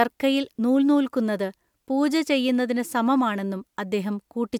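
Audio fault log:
Nothing to log here, as this speech clip comes through without any trouble worth noting.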